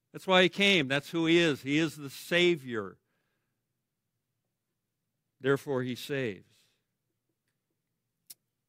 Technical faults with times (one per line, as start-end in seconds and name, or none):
none